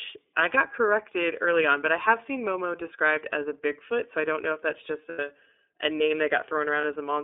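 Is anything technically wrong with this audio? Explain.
Yes. Throughout, the speech sounds thin, boxed-in and slightly rough and synthetic, with nothing below about 300 Hz or above about 3.5 kHz. This is the iLBC codec: a narrowband VoIP codec coding each frame's excitation independently, with plainly audible damage consistent with roughly 13 kbps and 30 ms frames.

At 5.09 to 5.19 s, between "know if that's just" and "a name", and again at 6.81 s, the sound briefly becomes a held, buzzy, breathy vowel. These are lost iLBC frames, about 90 ms and 30 ms long. The decoder repeats the last pitch cycle mixed with noise. Because each frame stands alone, the speech recovers almost immediately.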